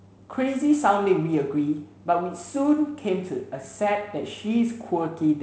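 Nothing goes wrong in this speech clip, which comes through G.722 wideband telephone coding with the sound reaching up to about 7 kHz, a faint hiss in the upper band and a slightly grainy lower band that fits the 48 kbit/s mode.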